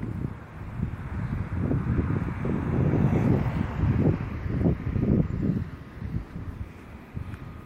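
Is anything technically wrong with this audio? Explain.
No, nothing is technically wrong with this audio.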